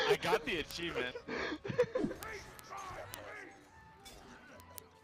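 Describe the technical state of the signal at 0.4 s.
At 0.4 s the signal carries word clock ticks, which run from 0.16 s to 5.03 s: around seventy sharp ticks of uneven strength, about every 0.07 s. A receiver is running on its own clock, and the pace points to a mismatch of roughly 300 ppm. Each slip drops or repeats one sample. A spectrogram shows thin, evenly spaced vertical lines across the band. The waveform shows a small step or kink at each tick.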